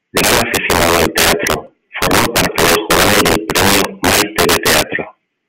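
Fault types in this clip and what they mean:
Integer overflow: The speech was pushed about 10 dB past the largest value the integer format can hold. Nothing limited it. The loudest peaks wrapped around to the opposite extreme instead of stopping at full scale. A small fraction of samples, roughly one in fifteen, goes over. Each one jumps across the whole range in a single step. The result is violent cracks that land on the louder parts of the speech all through the clip. They are far harsher than ordinary clipping.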